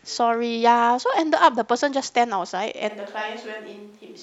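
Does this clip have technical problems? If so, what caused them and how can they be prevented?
Yes. From 2.91 s to the end, the close microphone's feed likely dropped out, leaving a switch to a distant microphone. The speech turns roomy and hollow at once, falls about 5 dB in level, and gains audible room noise about 30 dB below the speech. Monitor the close microphone's signal live, secure its connection, and record a backup close track.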